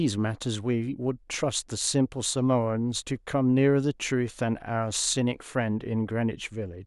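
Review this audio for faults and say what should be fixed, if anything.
Nothing to fix: no faults are audible anywhere in the speech.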